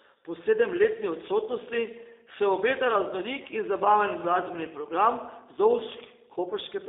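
Speech is carried through a G.729 codec for the whole clip. Nothing falls outside roughly 300 Hz to 3.7 kHz. Each frame is rebuilt from a vocal tract filter, a pitch predictor and sparse pulses. The result sounds plainly rough and synthetic, which fits an 8 kbit/s VoIP link.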